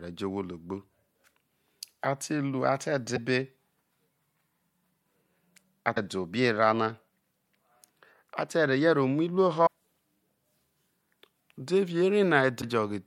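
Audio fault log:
3.15–3.18 s, 5.94–5.97 s, 9.65–9.67 s, 12.61–12.64 s: broken MP3 bit reservoir. Each is a brief glitch and skip, likely from cut frames whose successors borrow missing data; the frames are about 26 ms long.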